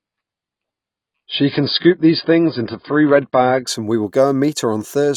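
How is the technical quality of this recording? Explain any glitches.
The technical quality is held back in the first few seconds by one fault. An adaptive stream starting at a low bitrate affects 0.0 to 3.67 s. The player began on a thin, low-rate version of the stream so that playback could start quickly, then switched to a better version once it had gauged the connection. Until that switch, nothing is heard above 5.1 kHz, so the speech sounds dull and muffled, with heavier coding artefacts. That fits an AAC stream at around 16 kbit/s. Just before "and we will", the treble returns abruptly with no gap in the sound, which points to a step up to around 96 kbit/s.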